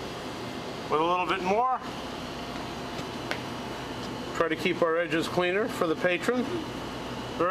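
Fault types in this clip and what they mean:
DAB burbling: A short burst of burbling around 2.98 to 3.01 s, lasting about 26 ms. Weak reception let bit errors slip past the error correction into the MP2 data, so corrupted samples put short blips of noise in single sub-bands. The brief span suggests only a few frames were damaged, at a low error rate of a small fraction of a percent.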